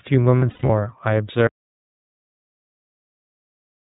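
A short speech recording, and it's been through the iLBC codec the whole way. The band stops at 4 kHz and the voice has that slightly rough, synthetic edge, clearly audible here. The texture fits iLBC's 30 ms frame mode at around 13 kbps, where each frame's excitation is coded on its own. From 0.39 to 0.70 s you get lost iLBC frames: about 180 ms of missing audio scattered over roughly 300 ms, which fits six lost frames, with the longest gap around a tenth of a second. The decoder fills each hole by repeating the last pitch cycle with noise mixed in, so those spots come out as a held, buzzy vowel, and the voice snaps back right after each one. Then at 1.47 s the audio drops out to silence and stays dead through the end. It's plain silence with no room tone, most likely because the input was lost or muted while the recorder kept writing.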